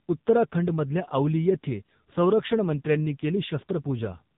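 From start to finish the speech has been squeezed through an AMR narrowband mobile codec at a very low bit rate, the heavy damage pointing to the 6.7 kbps mode. Nothing above 3.8 kHz survives, and the sparsely coded vocal-tract model leaves the voice muffled, buzzy and synthetic.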